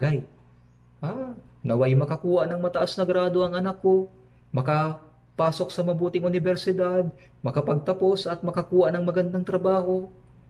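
No technical faults can be heard anywhere in the audio.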